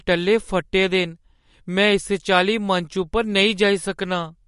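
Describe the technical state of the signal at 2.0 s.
At 2.0 s you're hearing the MP3 compression damage that runs through the whole clip: the treble stops dead at about 11.2 kHz, and the speech has that watery, swirly quality, likely from an encoder starved of bits, which fits a bitrate around 48 kbps.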